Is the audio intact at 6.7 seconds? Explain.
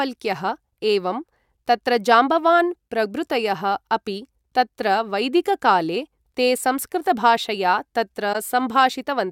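Yes, at 6.7 seconds the speech carries on intact, with no fault to be heard at that moment.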